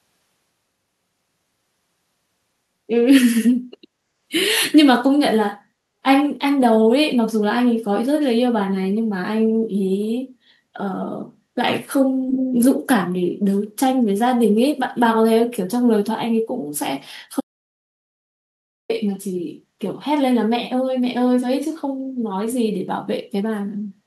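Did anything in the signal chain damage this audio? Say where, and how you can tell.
Yes. Echo leak at 12.27–12.58 s: the speech returns 231 ms late, about 5 dB quieter, likely from a far-end echo canceller in call processing passing loudspeaker pickup.

Audio dropout to silence from 17.41 to 18.90 s: 1.49 s of silence with no room tone, likely from lost input while recording continued.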